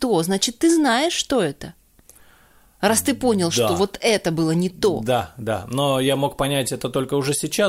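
Listening to this speech recording, nothing stood out as a technical problem at any point.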